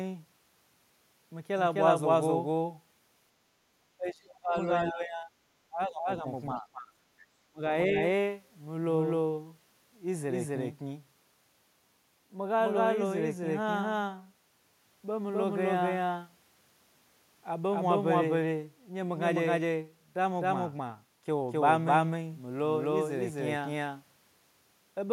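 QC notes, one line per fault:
throughout: doubled audio track. A second full-band copy of the speech trails around 300 ms behind at roughly the original's level. It is likely a second capture path or misaligned edit. Unlike room echo, the copy is dry, never decays, and keeps its fixed lag.
3.97–4.56, 4.84–5.32, 5.68–6.25, 6.54–6.92, 7.48–7.62, 7.88–8.0 s: speech suppressed in double talk. The speech repeatedly ducks by about 5 to 30 dB in chunks, likely an echo canceller clamping down while both sides talked. Unlike packet-loss gaps, these are gain dips.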